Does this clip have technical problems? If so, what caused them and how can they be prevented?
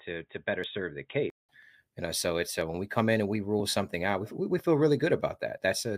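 Yes. From 0 to 1.49 s the sound is dull, with nothing above 3.8 kHz, and about 5 dB quieter. A 188 ms silence marks the switch back. This points to an input switched to a poorer device, likely a fallback microphone or headset call profile. Locking the input device before recording prevents it.

Short skips of roughly 10 ms fall at 0.64, 1.63 and 4.59 s, the last just after "something out we we". This is audio missing between chunks, consistent with one-second processing blocks. Overlapping or gapless buffer handoffs prevent it.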